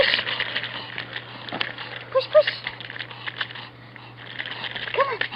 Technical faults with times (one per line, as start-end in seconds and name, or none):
none